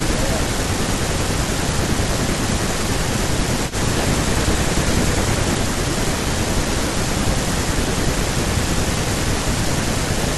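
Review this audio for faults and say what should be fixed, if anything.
The speech dips by up to about 10 dB in patches within 0.16–3.84, 5.11–7.79, 8.55–9.19 and 9.99–10.18 s, most likely speech suppressed in double talk, where the echo canceller ducked both sides. Tuning its double-talk detection would prevent this.

A faint copy of the speech, about 20 dB down and 174 ms late, flickers at 3.69–3.73 s, likely an echo leak from a loudspeaker the canceller missed. Better echo cancellation or a headset would prevent this.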